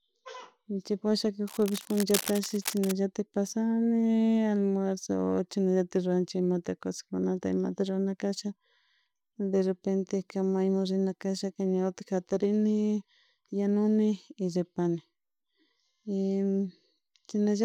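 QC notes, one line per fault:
1.47–2.93 s, cable scratch noise. A dense, uneven crackle and rustle sits over the speech for about 1.5 seconds. It comes in irregular bursts. The bursts sit roughly 10 dB below the speech. The likely cause is a worn cable or connector being moved. Its contact resistance jumps rapidly, and each jump adds a burst of noise.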